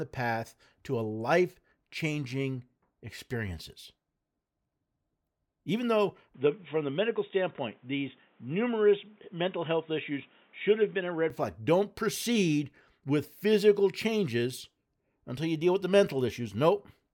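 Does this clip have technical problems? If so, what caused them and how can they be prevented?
Yes. The input likely switched to a poorer device from 6.34 to 11.30 s, cutting the band at 3.8 kHz, so the speech turns dull and boxy. A faint new noise floor appears, but the level barely changes. Locking the recording input to one chosen microphone, and keeping headsets from taking over in call mode, prevents this.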